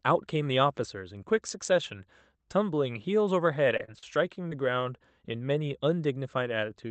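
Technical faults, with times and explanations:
3.68–4.81 s, repeated packet loss (robotic sound). Five short holes open in the speech, the longest 36 ms. Each is patched by repeating the last sound, about a tenth of a second in all. The quick run of patches sounds choppy, with pieces missing.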